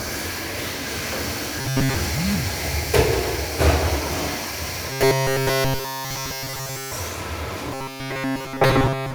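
From 1.61 to 1.95 s, 4.90 to 6.92 s and 7.74 to 9.15 s, the sound turns into a rigid metallic buzz fixed at 134 Hz. This robotic sound from repeated short buffers likely comes from a segment of about 7.5 ms being looped, covering most of the first stretch and all of the later two.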